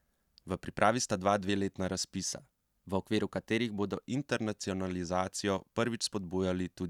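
Right after "pripravi sta dva dveletna", from 2.26 to 4.04 s, the speech runs about 5.6% fast and nearly a semitone sharp, then snaps back, likely a drift correction step.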